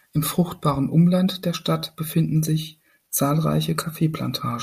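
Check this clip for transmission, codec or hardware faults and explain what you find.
Checking this clip turns up no faults to explain.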